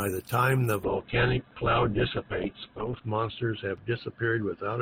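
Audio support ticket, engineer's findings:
Muffled, rough, watery speech from 0.84 s, right after "the time the", to end of clip. Top end cut from 20 kHz down to 4 kHz. Call bitrate drop: the encoder was starved, consistent with 32 falling to about 7 kbps, lowest for 1.97 s.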